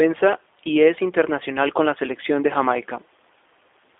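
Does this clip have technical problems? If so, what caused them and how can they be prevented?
Yes. The speech has passed through G.729 codec coding throughout, most likely its G.729A variant at the 8 kbit/s rate the sound points to. The codec resynthesises each 10 ms frame from a vocal tract filter, a pitch predictor and a few pulses, and the line passes only about 300 Hz to 3.6 kHz. That leaves the speech plainly rough, buzzy and synthetic, with everything above 3.6 kHz missing. Prevent this by using a wideband codec such as G.722 or Opus at an adequate bitrate.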